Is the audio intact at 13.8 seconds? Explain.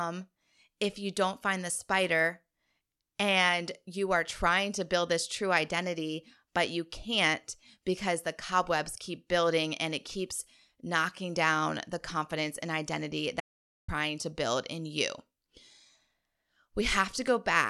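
No. At 13.8 seconds the clip is inside an audio dropout to silence running from 13.40 to 13.88 s, about 480 ms. The input signal was likely lost, through a disconnected device, a failed link or a mute, while the recorder kept writing silence. After "the confidence and identity" the speech cuts off abruptly into total silence with no room tone, then resumes mid-flow at "to build in you". Whatever was said in that gap is gone.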